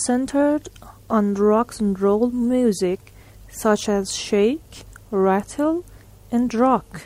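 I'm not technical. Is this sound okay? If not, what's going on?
No, not quite. Right after "roll music such as", at about 4.10 s, there's a block of digital silence. The sound drops out completely for under 3 ms and snaps back, so you hear a tiny tick, probably because the audio software didn't refill its buffer in time.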